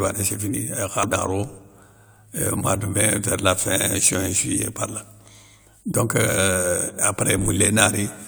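At 1.03 s there is a CD skip: the player's laser jumps to another turn of the disc's spiral, so playback mutes for only a few milliseconds, leaving a small tick, and the speech resumes from a different point on the disc, displaced by a whole number of disc revolutions. What tells this apart from a plain dropout or digital click is that continuity breaks. The speech does not pick up where it stopped but lands elsewhere, jumping the timeline.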